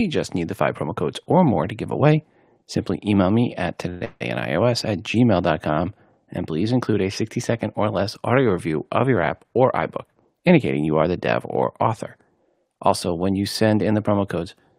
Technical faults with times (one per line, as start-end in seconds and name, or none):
3.89-4.22 call audio freeze
9.09-9.31 jitter buffer speed-up